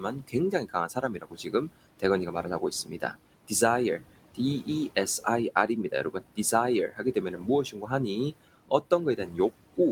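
Noise suppressor artifacts run through the whole clip. The suppressor pulls down every band it judges to be steady noise, by about 18 dB. The room noise, sitting about 16 dB below the speech, sinks in the gaps and swells back under each phrase.

The same processing also cuts speech. From 0.0 to 1.69 s it mistakes parts of the speech for noise and drops them by up to about 18 dB, over roughly a second in total. Shorter losses follow at 2.0 to 3.15 s, up to about 15 dB, and at 4.35 to 6.38 s, also about 15 dB. Each lasts a few hundred milliseconds. Then come 6.88 to 7.91 s, up to about 13 dB, and 8.69 to 9.39 s, up to about 16 dB. Soft consonants and word endings sound swallowed or faint there.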